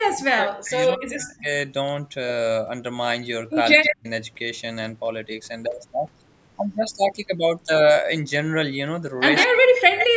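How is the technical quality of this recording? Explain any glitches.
The recording is marred by two recurring call faults, within a band that stops at 8 kHz.

Speech suppressed in double talk occurs from 0.0 to 1.48 s, 3.78 to 4.07 s and 9.47 to 10.15 s. With both sides talking, the echo canceller likely mistook this voice for loudspeaker echo and turned it down, so the speech sags by as much as about 40 dB.

Echo leak appears from 0.88 to 0.93 s, 3.83 to 3.96 s and 9.36 to 10.07 s. Loudspeaker sound likely slipped past an echo canceller and came back as a copy delayed by 136 ms, only about 10 dB below the speech in the first scrap and about 5 dB below in the later two.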